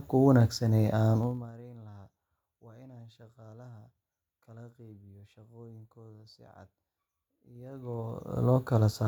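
At 1.18 to 1.53 s there's zipper noise as the speech drops by roughly 25 dB in 2 dB jumps, about fifty a second. Each unsmoothed step clicks, so you get a fast zip. It returns at 7.53 to 8.46 s on a similar rise, ticking at around twenty steps a second.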